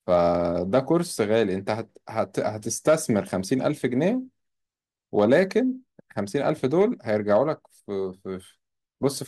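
Brief crackly distortion breaks through the speech at 2.88 to 2.94 s, 5.18 to 5.43 s, 6.49 to 6.82 s and 7.31 to 7.36 s. This is hard clipping: peaks overdriving a stage by about 1 to 3 dB are sliced flat, adding harsh high harmonics.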